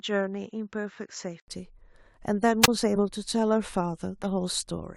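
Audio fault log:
0.00–1.48 s input switched to a poorer device: dull, boxy sound with nothing above 7.6 kHz, about 5 dB quieter, then an 80 ms gap at the switch; likely a lesser microphone in use.
2.61–2.68 s wireless microphone squelch dropout: a brief rise of hiss, then a 21 ms hole of near silence as the receiver's squelch mutes the faded radio signal.
2.95–3.01 s and 4.23–4.27 s compressed frames skipped: a short break where one 20 ms frame goes missing, so the sound jumps ahead about 20 ms.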